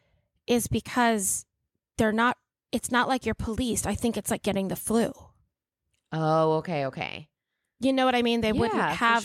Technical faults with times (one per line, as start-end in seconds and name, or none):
none